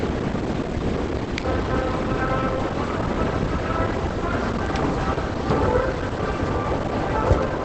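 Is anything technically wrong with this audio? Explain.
Yes, from start to finish the audio carries plainly audible Opus compression damage, likely from a low-bitrate encode somewhere around 16 kbps. Nothing comes through above about 8.4 kHz, so the top end is gone and everything sounds muffled and hoarse. At that rate the encoder drops into its speech-oriented SILK mode at wideband, which narrows the band and models the signal coarsely. You hear that as a dull, rough haze over the whole clip.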